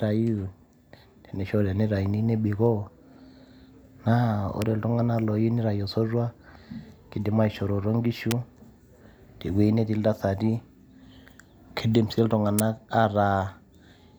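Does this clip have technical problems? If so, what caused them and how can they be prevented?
Yes. Electrical switching spikes produce sharp snaps at 4.62 s, 8.31 s and 12.59 s (just after "kidim sii"), the later two peaking near -5 dBFS. They are likely arcs from a nearby switch or motor coupling into the line. Unlike digital dropouts, the snaps sit on top of the speech without interrupting it. Using balanced, shielded cabling and keeping switched equipment on separate circuits away from the audio path would prevent this.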